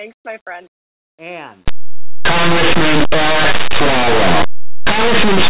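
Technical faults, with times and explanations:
1.68–5.50 s, linear audio read as companded: 8-bit samples decoded as mu-law turn values just on one side of zero huge, giving harsh distortion; waveform swings wildly, spectrogram shows broadband smear.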